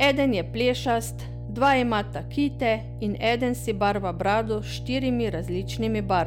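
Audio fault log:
Throughout: mains hum. A steady low 60 Hz tone sits under the speech the whole way, loud enough to be clearly heard, roughly 10 dB below the speech itself. Power-line current is leaking into the signal path, most plausibly through a ground loop or a nearby transformer.
0.02–0.23 s and 1.62–1.96 s: hard clipping. Peaks in these two stretches turn into crackle, the second ending just before "kite in". The signal overran a stage by about 4 dB, so peaks were flattened, adding high harmonics.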